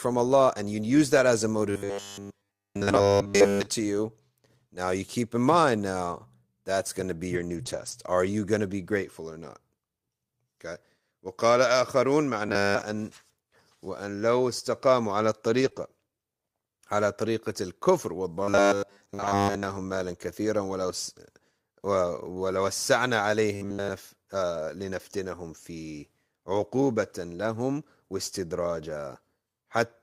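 From 1.71 to 3.67 s there is robotic sound from repeated short buffers. The audio turns into a rigid, metallic buzz at 100 Hz. That rate fits a 10 ms stretch being replayed over and over. The likely cause is new audio arriving too seldom, so the software repeats what it already has while real audio is skipped. Here all of the span is repeated, and the speech only loosely follows the original.

From 7.33 to 7.91 s there is a lost packet rebuilt from error correction. A run of packets went missing. Each one was rebuilt from a low-bitrate copy carried by the next packet, so there is no gap. About 300 ms is rebuilt, which fits a string of 20 ms packets. That stretch sounds rougher and noisier.

The robotic buzz returns from 12.47 to 12.81 s, again at 100 Hz, with about 70% of the span repeated.

Around 15.6 s the faults cluster. From 15.61 to 15.67 s, 40 ms is rebuilt from error correction. 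Then comes short concealed packet loss from 15.69 to 15.73 s and from 15.73 to 15.77 s. Each is a 20 ms hole that the receiver filled by extending the last sound and then blending back. It comes through as a brief smear. From 15.77 to 15.87 s, another 60 ms is rebuilt from error correction, sounding rough and noisy.

The robotic buzz comes back from 18.43 to 19.64 s and from 23.56 to 23.91 s. Both are at 100 Hz, with about 70% repeated.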